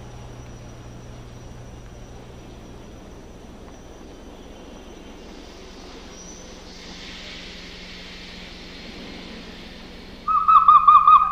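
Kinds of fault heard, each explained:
No technical faults detected.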